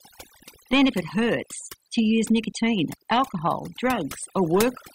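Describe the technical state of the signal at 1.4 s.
Overdone noise removal is present at 1.4 s, as it is across the whole clip. An aggressive noise reducer is pulling individual frequency bands down or off wherever they sit near its noise estimate, taking quieter speech detail with them, so the background drops and breaks up into twinkling specks.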